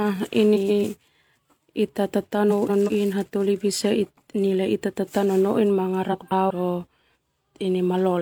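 Frames out of order occur at 0.55–0.83 s, 2.50–2.90 s (just before "hataholi bisa") and 6.12–6.51 s (just after "ita tatao nonoin"). At each one, two adjacent blocks of speech are swapped: about 139 ms each the first time and about 186 ms each the other two times. The result is a garbled flutter, and no time is lost.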